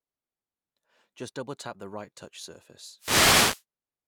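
A burst of static swishes over the speech from 2.97 to 3.64 s, just after "tap the right touch". This is a wireless microphone noise hit: the FM radio link faded as reflected signals cancelled, so receiver noise rose.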